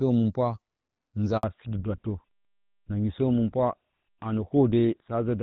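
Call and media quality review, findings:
Handover gap at 1.37 s. Audio drops out for 60 ms, back at 1.43 s. Probable component: network handover. No speech frames arrived while the call switched links, so that stretch of sound is lost.

Fallback to narrowband from 1.43 s to the end. Nothing above 4 kHz after the gap. Sound turns duller and rougher. Probable component: codec renegotiation. Before the gap the sound fits HD Voice, AMR-WB near 12.65 kbit/s. After it, it fits GSM full rate.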